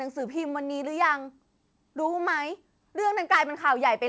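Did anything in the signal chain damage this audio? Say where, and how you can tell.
Yes. At the converter, between 3.32 and 3.38 s, a loud peak turns harsh and crackly. Its tops are flattened, with a small share of samples driven about 4 dB past full scale. The likely cause is microphone overload, with input gain set too high.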